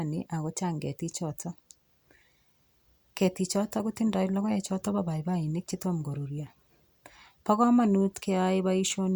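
No technical faults are audible.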